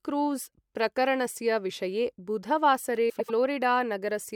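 Speech, with frames out of order from 3.09 to 3.31 s: two neighbouring 96 ms blocks play swapped, giving a garbled flutter.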